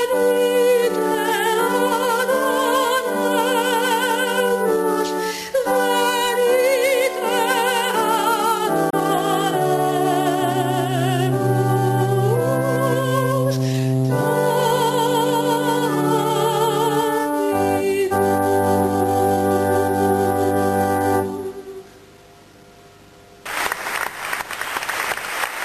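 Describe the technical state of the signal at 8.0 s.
Nothing at 8.0 s points to a fault; the signal there is intact, with no dropout, clipping, glitch or other audible defect.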